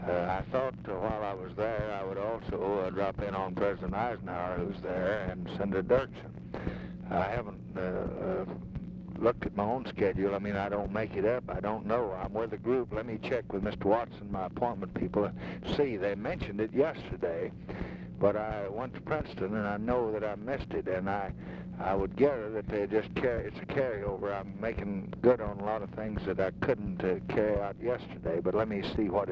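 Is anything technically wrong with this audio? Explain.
No, nothing technically wrong can be heard here.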